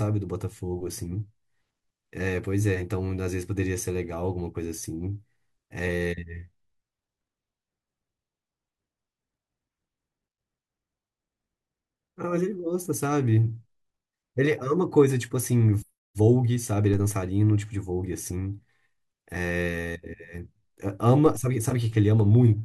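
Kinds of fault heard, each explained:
DC step: the signal's zero line jumps abruptly by about -26 dBFS and then decays slowly through a 2 Hz high-pass, giving two low thumps beneath the speech.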